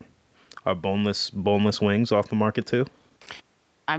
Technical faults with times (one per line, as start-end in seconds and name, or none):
none